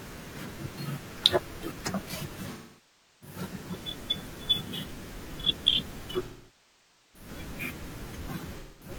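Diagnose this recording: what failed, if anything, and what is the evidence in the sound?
AAC frame loss with concealment occurs at 2.52–3.37 s, 6.24–7.29 s and 8.59–8.91 s, a codec-stage fault. About 0.68 s, 0.90 s and 0.21 s of coded frames went missing, and the decoder rebuilt each gap from the last good spectrum. The speech there sounds smeared and synthetic.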